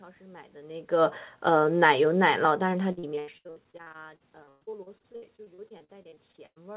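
From 2.92 s to 6.58 s the speech breaks up with repeated packet loss, giving a robotic sound. Dozens of short holes, the longest 119 ms, are patched by extending the preceding audio, so about a third of the stretch is fill, choppy with pieces missing.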